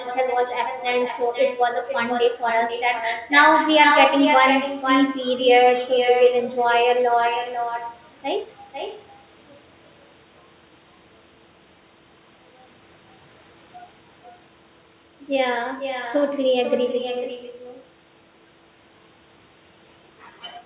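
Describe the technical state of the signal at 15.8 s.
At 15.8 s an echo with no canceller is present, as throughout: the far end's loudspeaker sound returns, about 8 dB quieter, roughly half a second later, visible as a quieter delayed copy of each syllable on the spectrogram.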